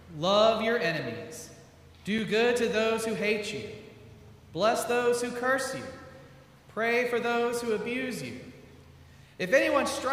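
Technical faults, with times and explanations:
2.18 s, block of digital silence: the audio drops to silence for 5.3 ms, which fits a 256-sample buffer not filled in time. It then resumes without a fade. The waveform shows a flat gap; the spectrogram shows a thin broadband vertical stripe.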